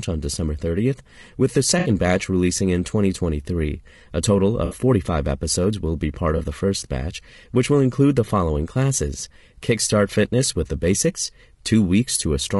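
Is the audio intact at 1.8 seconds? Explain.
No. From 1.79 to 1.89 s, between "with the" and "batch releasing in", the sound turns into a brief smeared, noisy, phasey patch. This is AAC frame loss with concealment: a few coded frames, which fits about three frames or 60 ms of audio, never reached the decoder. The decoder rebuilt the gap from the last good spectrum with its fine detail scrambled, so the patch keeps a rough outline of the preceding sound without its clean structure.

Around that moment, as through the whole clip, the speech is grainy and rough, with a hiss-like fill between the pitch harmonics and a dulled, somewhat synthetic top band. The likely cause is low-delay AAC compression (AAC-ELD). Its very short frames cannot separate closely spaced harmonics well, and at a bitrate that sounds like roughly 32 kbps there are too few bits to code them cleanly, so noise fills the gaps and the highs are approximated.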